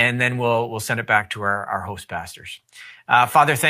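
No technical faults are audible anywhere in this speech recording.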